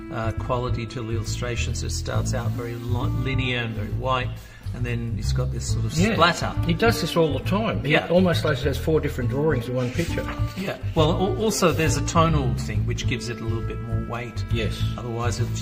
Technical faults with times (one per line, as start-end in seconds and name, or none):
none